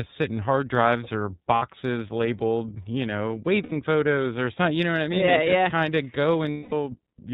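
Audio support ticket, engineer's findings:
Speech band-limited, nothing above 4 kHz, plainly rough and a bit synthetic throughout. That's the iLBC codec: narrowband, each frame's excitation coded standalone, so no smoothing across frames. Grain and bandwidth fit the 13.33 kbps mode with 30 ms frames. Probable component: the VoIP leg's codec negotiation landing on iLBC instead of a wideband option.

Lost iLBC frames, three dropouts: 1.56–1.63 s (60 ms), 3.63–3.73 s (90 ms), 6.51–6.72 s (210 ms). Each gap is a held, slightly buzzy vowel, the decoder looping the last pitch cycle with noise mixed in. The long one at 6.51 s fades out, consistent with about seven frames gone in a row. Speech snaps back clean right after each gap, as expected with standalone frames. Probable component: network path dropping packets.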